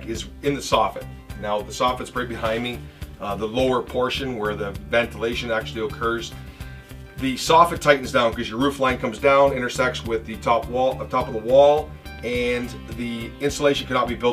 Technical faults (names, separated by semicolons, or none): none